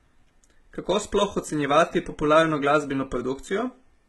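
HE-AAC compression, likely, runs through the whole speech clip: the top of the spectrum has been rebuilt by copying lower bands upward, so sibilants sound gritty and lispy, with nothing above 11.8 kHz and heavy damage that fits a very low bitrate near 16 kbps.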